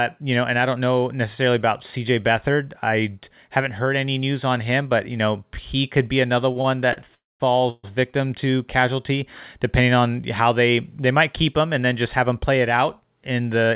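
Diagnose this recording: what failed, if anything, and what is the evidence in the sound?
Network jitter left the buffer empty three times, causing short stalls from late packets after "he could be another": the last sound is held with a slight buzz or dip at 6.52–6.57, 6.61–6.66 and 6.93–6.98 s.

Call audio freezes at 7.14–7.42 and 7.70–7.85 s, likely from held-up packets: the sound decays into a fading buzz or hiss, then about 200 ms of silence in the first, before resuming intact.

Jitter buffer speed-up after "him and then just": the overfull buffer drops pitch-period slices, roughly 150 ms in all, so 12.20–13.71 s runs 8% faster at unchanged pitch through the 4 kHz-limited G.711 path.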